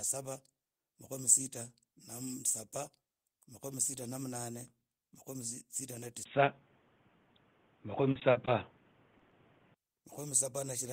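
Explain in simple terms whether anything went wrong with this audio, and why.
Three things go wrong in this speech clip.

From 6.23 to 9.76 s the sound turns dull and muffled after a brief silence, likely an input switched to a poorer device. Nothing above about 3.8 kHz comes through, and there is a new background hiss.

From 8.11 to 8.49 s there is repeated packet loss (robotic sound): four quick gaps are patched over, giving a choppy stretch rather than one dull tone.

At about 9.17, 9.21 and 9.29 s there is short concealed packet loss: tiny smears, each brief instead of a sustained robotic run.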